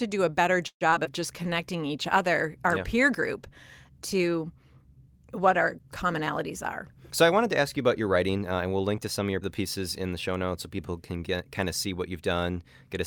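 From 0.67 to 1.07 s, just after "do a better", repeated packet loss gives a robotic, choppy stretch. Four gaps get patched by stretching the last sound, the longest lasting 133 ms.

From 1.41 to 7.22 s, a call bitrate drop makes the speech rough and muffled. The coarser coding and lost high frequencies point to a fall from about 64 to 28 kbps.

From 1.43 to 1.89 s, a jitter buffer slow-down repeats short pitch periods. Speech runs at 90% speed at unchanged pitch, gaining 54 ms and sounding drawn out.

From 7.22 to 8.52 s, just before "and we'll link to", a jitter buffer speed-up trims short pieces. Speech runs at 108% speed, sounds hurried, and loses roughly a tenth of a second.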